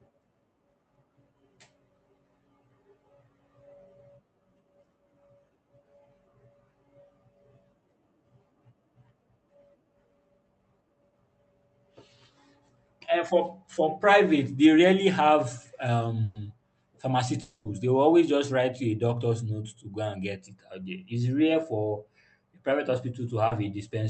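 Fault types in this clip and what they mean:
Burst of packet loss: At 16.23 s, right after "private they rarely have", about 120 ms of the speech never arrived in time, and the receiver stretched the last sound across the hole while fading it down. It comes across as a held buzz or hiss that dies away before speech resumes further on, with that stretch missing. A spectrogram shows flat, repeated bands thinning out. The waveform shows a uniform, repeated stretch shrinking in amplitude, then an abrupt restart.
Long network dropout: At 17.41 s there is a longer break of about 240 ms. The last sound is continued as a buzz or hiss that fades steadily across the whole gap, and speech comes back at 17.67 s with that quarter second gone. The likely cause is a network stall long enough that nothing reached the receiver. On a spectrogram it looks like a smeared, featureless band dimming over time. 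The waveform shows a decaying, repetitive envelope instead of normal speech structure.
Short concealed packet loss: At 23.47 s about 40 ms of audio failed to reach the decoder, and the gap was patched by extending the preceding sound before blending back into the real signal. It is heard only as a brief smear or wobble, and a quick consonant there can disappear. A spectrogram shows a tiny column where fine detail blurs into a copy of what came before. In the waveform, a few repeated cycles briefly break the natural variation.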